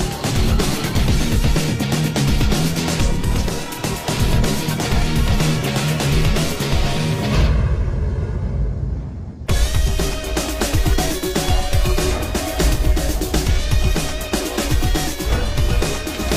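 No technical fault can be heard anywhere in the audio; the signal holds steady and intact throughout.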